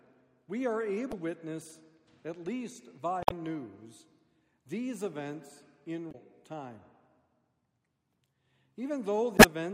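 Damaged data in a compressed stream causes four brief disturbances, at 1.09–1.13 s, 3.21–3.32 s, 6.08–6.15 s and 9.35–9.44 s, where corrupted bytes made the decoder misread frames and resynchronise.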